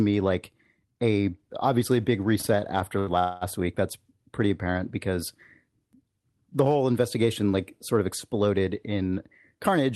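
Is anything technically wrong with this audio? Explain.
Yes. Three call-transport faults are audible in this speech clip, all consistent with a WebRTC path using Opus, whose coding noise and top end near 12 kHz can be heard throughout.

Repeated stalls (stutter) run from 2.41 to 3.10 s, right after "a obviously a big". The receiver's jitter buffer ran dry four times as packets arrived late or too slowly, and each time it extended the last sound to bridge the wait. About 117 ms of filler was inserted, the longest single gap 82 ms, roughly 17% of that stretch. No audio is lost, but the speech drags and hiccups.

A call audio freeze follows from 3.19 to 3.44 s. The sound is held and continued as a fading buzz or hiss for 223 ms, without dropping to silence, and then resumes exactly where it stopped. The likely cause is packets held up in transit, emptying the jitter buffer. Playback delay grows by the same 223 ms, so a gap is inserted rather than content removed.

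A jitter buffer speed-up occurs from 9.55 to 9.91 s, just after "sort of exploded in". Having built up excess buffered audio, the receiver trimmed many short pitch-period-sized slices to shed delay, about 40 ms in total. The passage plays at about 110% speed with unchanged pitch, so the speech sounds briefly rushed.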